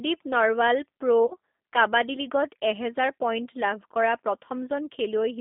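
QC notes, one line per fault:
Throughout: G.729 codec. The speech sounds narrow, slightly rough and synthetic, with no low bass and nothing above about 3.6 kHz, and the line band runs from roughly 250 Hz up. The damage is plainly audible. This fits G.729 at 8 kbit/s. The decoder rebuilds speech from a vocal tract filter, a pitch predictor and a few sparse pulses per 5 ms subframe, so fine detail is replaced by a coarse, buzzy approximation.
1.26–1.34 s: VoIP packet loss concealed by the speech codec. For about 74 ms the speech smears into a stretched sound that fades instead of continuing naturally, and it stays weak and distorted briefly after. Around 40 ms of audio went missing, which fits two lost 20 ms packets. The decoder filled the gap by repeating its last pitch and filter settings at falling gain. Because each frame builds on the previous one, the speech takes a moment to recover once packets return.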